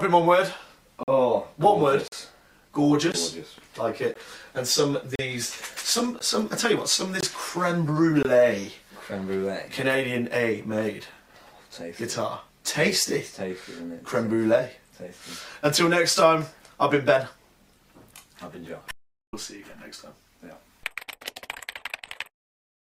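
Gaps between stream segments at 1.03, 2.08, 3.12, 4.14, 5.16, 6.19, 7.21 and 8.23 s, one per 1.0 s segment, insert hard-edged silent holes of 15 to 45 ms; no audio is lost. From 18.91 to 19.33 s an audio dropout to silence cuts 422 ms, likely from lost input, leaving no room tone.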